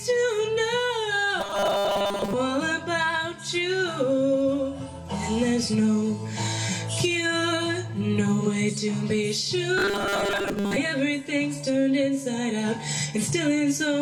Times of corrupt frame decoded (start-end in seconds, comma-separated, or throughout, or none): none